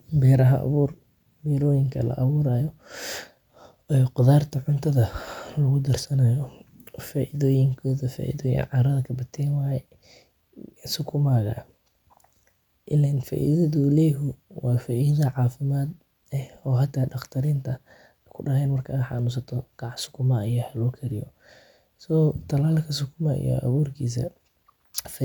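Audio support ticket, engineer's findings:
No audible faults found in the speech signal; level, continuity and timing hold steady throughout, with nothing pointing to a problem in the capture, processing or playback path.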